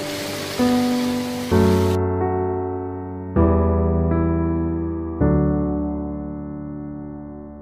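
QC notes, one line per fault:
Nothing here to flag, and no faults turned up anywhere in this one.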